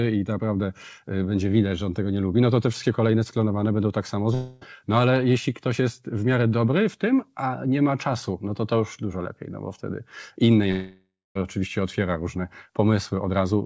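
At 4.34 s, right after "sklonowane będą tak samo", the speech breaks off for about 0.3 s. The last sound is stretched into a fading buzz, and about 280 ms of speech never returns. This is likely a long network dropout. At 10.71 s, after "no bo wtedy inne", it happens again for 0.66 s. The fill fades to silence for about 250 ms. Speech resumes at "oczywiście otwiera różne", 640 ms lost. Through the G.722 call path, nothing sounds above 8 kHz.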